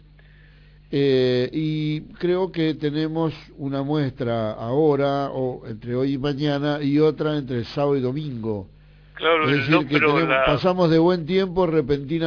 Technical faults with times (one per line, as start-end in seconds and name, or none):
0.00-12.27 aliasing